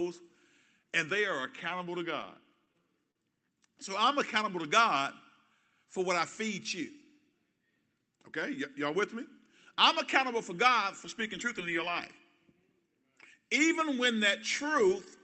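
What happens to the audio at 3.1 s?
At 3.11 to 3.17 s there is a short stall from a late packet: the jitter buffer ran dry and about 42 ms of sound was stretched, holding briefly without losing anything.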